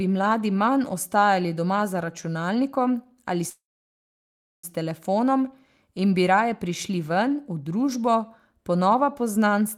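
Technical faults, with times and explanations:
3.49–4.66 s, call audio freeze: after "doma za računalnikom ali" a short fading buzz becomes 1.04 s of flat, empty waveform and blank spectrogram. The speech then resumes intact at "telefonom in bi raje", likely because delayed packets emptied the jitter buffer.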